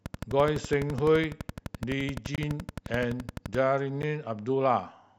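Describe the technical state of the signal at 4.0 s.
At 4.02 s the speech drops into a block of digital silence about 10.7 ms long, which fits a 512-sample buffer left unfilled. The abrupt cut in and out is heard as a tick or dip; the waveform shows a flat line, the spectrogram a blank slot bordered by broadband vertical streaks.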